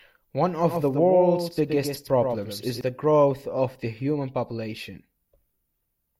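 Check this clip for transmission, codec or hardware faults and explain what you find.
One fault: from 0.67 to 2.81 s the speech carries a doubled audio track, a dry copy roughly 100 ms late and about 5 dB quieter, likely from a second, slower capture path, starting and stopping abruptly.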